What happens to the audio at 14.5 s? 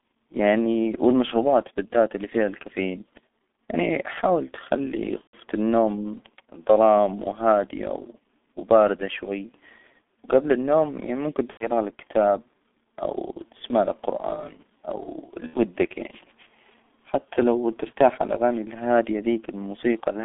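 At 14.5 s the speech carries G.723.1 codec damage, present across the whole clip rather than only at that moment. The coder models the voice in 30 ms frames at a very low rate, which fits about 6 kbit/s, so the speech turns muffled and hoarse with smeared consonants. A spectrogram shows energy confined to roughly 200 Hz to 3.6 kHz, with nothing above, and blocky, frame-rate smearing of the harmonics.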